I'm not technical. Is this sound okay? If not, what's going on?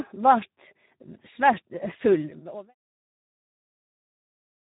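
No. The speech has been squeezed through the Speex codec, an old internet-call format, at a harsh setting. It sounds hoarse and noisy, with everything above 3.8 kHz missing. The gentle fade-out from around 2 s to 2.75 s is a normal edit.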